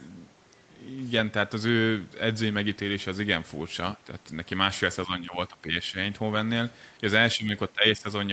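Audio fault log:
5.06–5.95 s, 7.35–7.51 s, 7.73–8.06 s: speech suppressed in double talk. With both ends talking at once, the echo canceller likely treated the near-end speech as loudspeaker echo and attenuated it, so the speech sinks by about 10 to 15 dB in short, broken patches.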